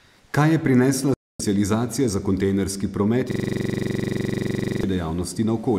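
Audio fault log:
1.14–1.42 s, Bluetooth dropout: the sound cuts to sudden silence for roughly a quarter of a second, then comes back further along, as if it had kept playing. The likely cause is wireless packets arriving too late and being discarded before playback.
3.31–4.83 s, system hang loop: a coarse, rattling stutter at about 23.4 Hz, with the same 42.67 ms piece repeated about 36 times. The system froze while the audio hardware kept replaying its ring buffer, which fits a 2048-sample buffer.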